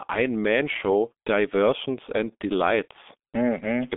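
Throughout the recording, the speech has passed through the G.723.1 codec. This low-rate telephony coder squeezes each 30 ms frame into a handful of model parameters, and the heavy damage here fits a stream near 6 kbit/s. The line passes roughly 200 Hz to 3.6 kHz, with nothing above 3.8 kHz, so the speech sounds muffled and boxy. The slow-updating voice model leaves a hoarse, buzzy edge and smears consonants into one another.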